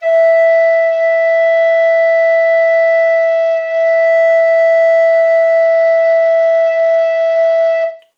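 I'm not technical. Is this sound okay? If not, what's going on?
No. From 0.46 to 4.06 seconds, and again from 5.62 to 8.00 seconds, the music loses its sparkle: the high, bright parts go dull and a gritty, sandy noise creeps in. In between it sounds clearer. This is a Bluetooth SBC bit pool drop. When the wireless link gets crowded, the phone squeezes the music into less data to keep it playing. It drops the highest sounds first and handles the rest more roughly.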